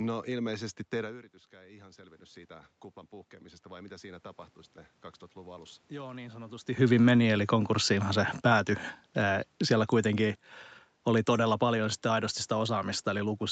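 From 1.0 to 2.78 s there is automatic gain rising. The talker moves around 1 s, and the input drops by about 20 dB. The gain control slowly lifts its gain by about 6 dB, so voice and room noise swell together. It rises again from 3.3 to 4.33 s, by about 3 dB, and from 5.33 to 6.73 s, by about 4 dB.

Automatic gain falling follows from 6.75 to 10.36 s. The talker moves again around 6.5 s, and the control now finds the input too loud, or its background too strong, for its gain. The control eases its gain down by about 4 dB. Speech and background sink together.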